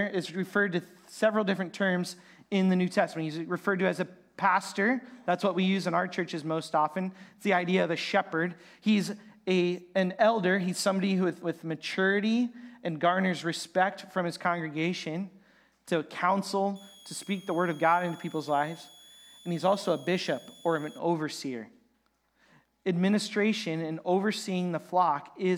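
From 16.76 s to 20.99 s a switching supply whistle rises out of the audio: a thin, high whine wandering between about 3.28 kHz and 3.47 kHz, sitting roughly 25 dB under the signal. A switching power supply has dropped into an audible burst mode or is beating with another one, so its regulation cycle lands inside the hearing range. On a spectrogram it shows as a narrow, slightly wavering horizontal line near 3.4 kHz.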